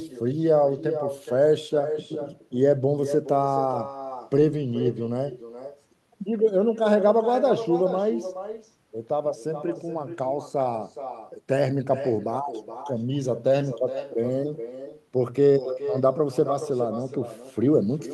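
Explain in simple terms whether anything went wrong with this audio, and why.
Echo with no canceller runs through the whole recording: the far end's loudspeaker fed the microphone, so every phrase returns about 0.4 seconds later as a fainter, hollow copy.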